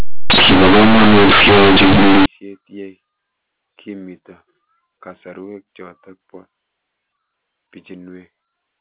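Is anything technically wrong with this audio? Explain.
Yes. From 0 to 2.26 s the A-law companded audio is read as linear 8-bit samples with no expansion, so every sign change swings across about half the range, quiet speech and pauses blast as loud as peaks, giving harsh buzzy distortion and heavy noise. Unlike clipping, the silences are loud too. After 2.26 s the G.711 telephone coding is heard correctly, with nothing above 4 kHz.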